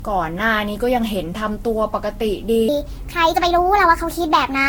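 Throughout, the speech has a swirly, hollow smear and blurred consonant attacks. This is generation loss, likely from about seven passes through a Vorbis-style codec near 62 kbit/s. A single encode at that rate would not sound this smeared.

From 2.69 s to the end, a section at the wrong speed runs 1.35 times too fast, likely from being fitted to the wrong clock. The voice turns hurried and rises about five semitones. Unlike a pitch shift, tempo and pitch move together.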